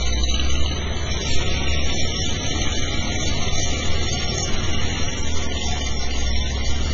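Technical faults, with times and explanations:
Throughout: heavy MP3 compression, likely the cause. Nothing comes through above 7.5 kHz, so the top end is sliced off flat, and the rest has that watery, swirly quality. Starved of bits, the encoder keeps dropping quieter frequency bands and bringing them back frame to frame, so detail flickers in and out and transients smear. Damage this bad points to a very low bitrate, something around 16 kbps.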